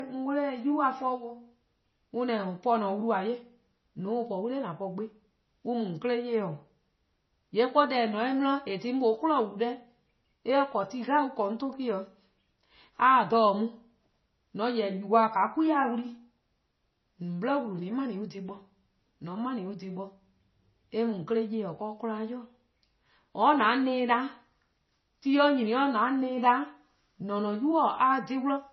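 Throughout, the speech sounds dull and swirly, with nothing above 5.9 kHz: likely low-bitrate audio saved at a high bitrate, keeping the first MP3 encode's losses.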